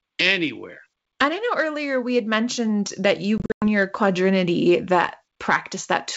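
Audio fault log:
3.38–3.65 s, packet loss on an ADPCM call: just after "had mentioned that you" the G.722 wideband audio breaks into hard-edged silent holes, about 180 ms missing across roughly 240 ms, with the longest gap 100 ms, which fits around ten dropped packets. The gaps are filled with plain silence, and the receiver's adaptive predictor and step size drift out of sync with the sender's. So sound comes back before "your quadrinity" slightly distorted, then settles within a few tens of milliseconds.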